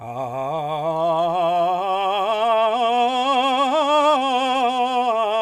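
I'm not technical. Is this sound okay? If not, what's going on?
Yes, no technical faults are audible anywhere in this music.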